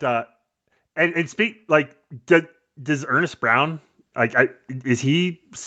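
From 0.94 s to 5.51 s, the speech and the background swell together. This is automatic gain rising. The gain control judged the input too quiet and kept turning it up, slowly, over about four and a half seconds. The total lift is about 12 dB. Because the gain acts on everything, the room noise climbs along with the voice. The whole clip is band-limited to 8 kHz by the call path.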